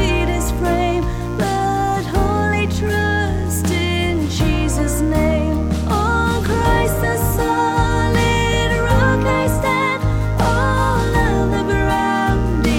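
A steady, raspy mains buzz runs under the sound for its whole length, sitting roughly 30 dB below the signal. It is built on 60 Hz: sharp switching spikes from a dimmer, rectifier or unshielded connection enter the chain twice per mains cycle, so the hum carries a dense series of 60 Hz harmonics extending up into the kilohertz range. That harmonic content makes it a buzz rather than a pure low hum.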